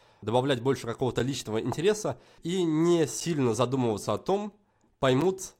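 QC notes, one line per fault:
5.21 s, gap between chunks: a brief hole of about 7 ms with hard edges cuts into the speech, then the sound resumes with nothing missing. The audio was delivered in 2-second chunks, and a short silence was left at this join before the next chunk started.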